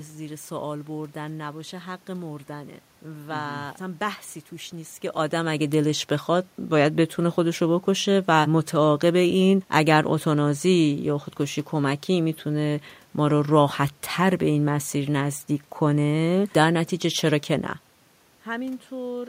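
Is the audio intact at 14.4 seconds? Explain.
Yes, the audio at 14.4 seconds is intact, with nothing there beyond the background noise of the room it was recorded in.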